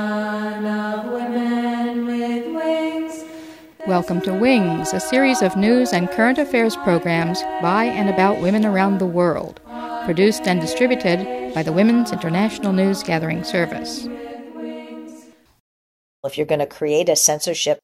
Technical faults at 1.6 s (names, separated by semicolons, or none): none